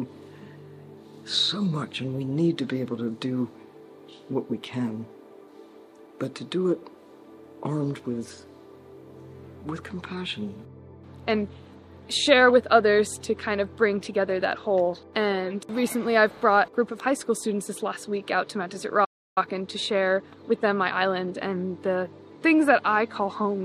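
At 19.04 s the sound halts mid-flow and stays silent until 19.38 s, a gap of about 0.32 s, then resumes. This playback stall likely comes from the player starving for data or its thread blocking. On the waveform it is a flat line, and on a spectrogram a clean vertical blank band.

From 19.38 s to 21.48 s a time-compressed catch-up follows. The player trims its backlog by splicing out short pieces and cross-fading the joins, so the sound runs about 1.15 times faster at unchanged pitch. Spectrogram harmonics stay level but events sit closer together, with seams at the splices.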